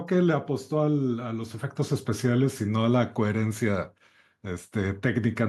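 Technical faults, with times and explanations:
No technical faults can be heard in this speech recording. There is nothing here that needs a time or an explanation.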